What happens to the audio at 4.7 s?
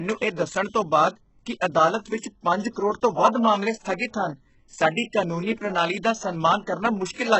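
At 4.7 s the speech carries HE-AAC compression, present throughout. Treble is likely rebuilt from copied lower bands, so s sounds turn gritty, with nothing above 8 kHz.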